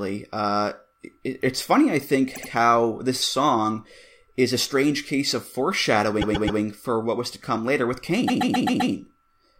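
A stutter breaks the speech three times. At 2.34 s, after "it's funny I think", a 78 ms block plays three times. At 6.21 s, before "for what was to", a 131 ms block plays four times. At 8.27 s, after "was to come later", a 131 ms block plays six times. These are repeated frames: the same compressed data was decoded again, and each repeat makes the audio longer.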